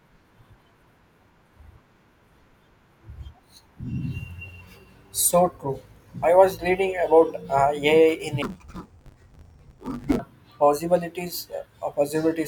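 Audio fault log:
8.42–10.19 s, interleaved audio read as planar: speech turns dull and robotic. Each 10 ms block is split wrongly into channels, causing a 100 Hz buzz.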